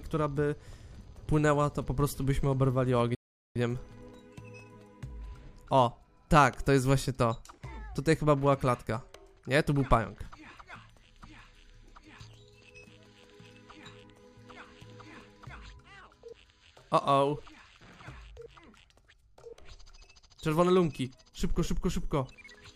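A playback stall runs from 3.15 to 3.56 s: the sound cuts off mid-flow and the output stays silent for about 0.41 s before resuming. The player likely ran short of buffered data or had its playback thread briefly blocked.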